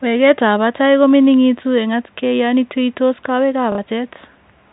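A speech clip heard through a telephone-band channel, with nothing above 4 kHz. At 3.72 s, just after "atkay yon tuuytos kowekap", there is a short robotic stutter lasting 60 ms, to 3.78 s. This is packet loss with the last packet repeated. Audio went missing, and the receiver replayed its last good chunk to fill the gap. The gap fits two lost 30 ms packets, which gives the roughly 33 Hz buzz.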